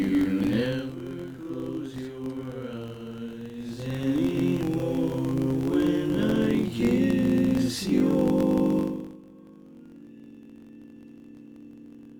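From start to finish the audio carries a filter restarted on every block. The filter discards its internal state at each block boundary and begins again from silence, so every block opens with a small transient. These repeat at 46.9 Hz, which fits a 1024-sample block, and they merge into a steady buzz that rises and falls with the level of the sound rather than sitting at a fixed loudness.

From 8.78 to 9.22 s a level drop of roughly 25 dB is applied without smoothing, producing zipper noise. The gain moves in 1 dB increments, around fifty a second, and each jump puts a small discontinuity into the waveform. Over those 0.44 s the steps are heard as a rapid ticking or zipping laid over the sound as it fades down, stopping once the level settles.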